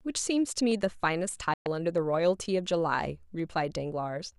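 Sharp single clicks interrupt this speech clip at 0.72 s, 1.98 s and 3.40 s. Each is most likely a case of dropped samples, with only a handful missing, so the waveform steps abruptly and the spectrogram shows a thin vertical line. Between 1.54 s and 1.66 s the sound fades out over about 3 ms and goes silent for 120 ms, a digital broadcast dropout. This fits the receiver muting through a short run of corrupted frames, leaving a flat waveform gap and a blank spectrogram column.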